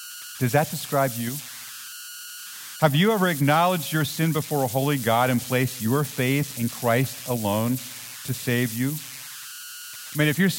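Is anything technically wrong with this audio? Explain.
Yes, there are converter idle tones running through the whole speech clip. An undithered delta-sigma converter slips into repeating bit patterns on quiet input, producing a whistle around 1.5 kHz in the pauses and grainy noise under softer passages, sitting only about 13 dB below the signal.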